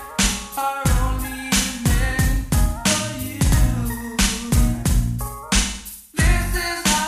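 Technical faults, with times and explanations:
No technical faults detected.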